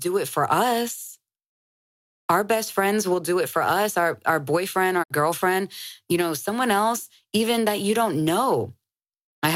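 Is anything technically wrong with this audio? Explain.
Yes. At 5.02 to 5.12 s, just after "us our our boyfriend", a digital broadcast dropout occurs. The receiver muted on bad frames, so the speech fades out over about 20 ms and goes silent. About 64 ms of programme is lost, which fits two corrupted frames.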